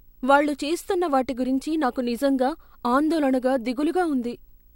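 A screen or video cable couples into the audio throughout, causing video or display buzz: a 59.94 Hz field-rate buzz with hash, plus a faint 15.7 kHz line tone, well below the speech.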